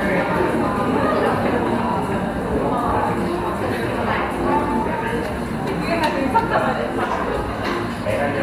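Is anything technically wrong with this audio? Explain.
No, nothing technically wrong turns up here; the audio just sounds the way it should all the way through.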